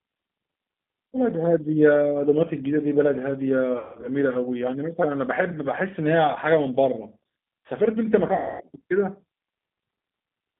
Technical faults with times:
0.00-10.59 G.729 codec
3.79-4.09 VoIP packet loss concealed by the speech codec
8.34-8.63 VoIP packet loss concealed by the speech codec

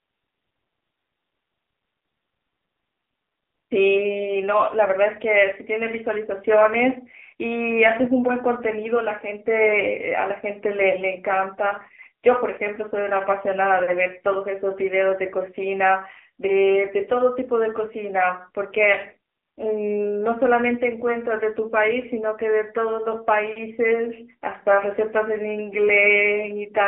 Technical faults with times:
0.00-26.88 AMR narrowband mobile codec

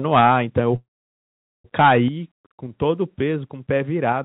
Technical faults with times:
0.13-0.59 microphone overload
0.21 microphone volume stepped down
0.76-1.66 call audio freeze
1.78-1.98 microphone overload
2.08 microphone volume stepped down
4.12 microphone volume stepped down

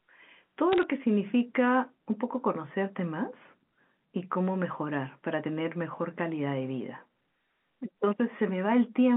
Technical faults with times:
0.72-0.83 bit errors on a digital phone line

